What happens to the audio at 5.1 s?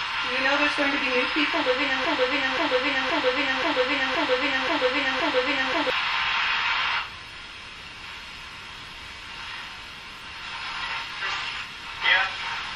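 At 5.1 s a broken-record loop is playing. One 0.53 s fragment repeats seven times from 2.05 to 5.9 s, likely from a stalled stream.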